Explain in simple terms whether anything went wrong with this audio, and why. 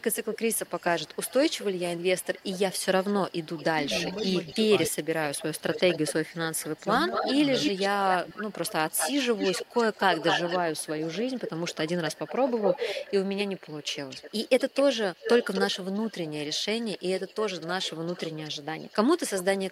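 Echo leak runs from 0.0 to 14.83 s and again from 15.14 to 19.7 s: a fainter copy of the speech repeats about a quarter second later, likely because the far side's loudspeaker sound wasn't fully cancelled.

Speech suppressed in double talk occurs at 4.53–5.11 s, 5.62–6.36 s, 6.75–6.89 s and 7.72–8.4 s: the voice dips or drops out briefly, likely because the echo canceller turned everything down while both sides talked.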